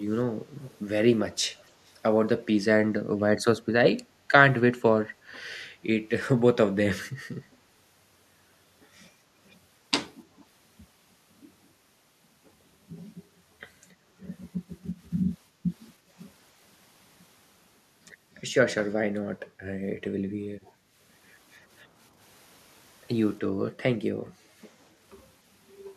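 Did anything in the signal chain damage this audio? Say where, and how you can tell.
Yes. The damage is in call processing, at the far end's echo canceller. From 0.62 to 0.79 s a very faint delayed copy of the speech sits under the direct signal, about 296 ms behind it and roughly 30 dB down. This is an echo leak. The likely cause is that the canceller on the loudspeaker side failed to subtract everything its microphone picked up, so a residue of the returning signal travelled back along the call.

The same processing stage also shows background gated by the echo canceller. The room tone ducks at 15.49 to 15.64 s, 15.99 to 16.1 s, 20.72 to 20.94 s, 23.49 to 23.62 s and 24.14 to 24.58 s. Each dip lasts from about a tenth of a second to nearly half a second, and the deepest drops are about 7 to 12 dB. While the loudspeaker was active, the canceller clamped the microphone path down hard, and the ambience returned once it released.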